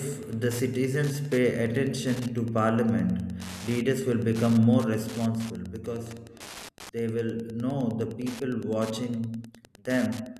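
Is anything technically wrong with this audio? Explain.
Yes. The speech carries Wi-Fi interference from start to finish. A Wi-Fi radio sits close to the audio circuitry. Its beacon goes out every 102.4 ms. The circuit rectifies each burst into the audio path, so every beacon lands as a click. The result is a steady ticking, close to ten times a second, like a fast mechanical clock under the voice. It stays well below the speech, roughly 20 dB down.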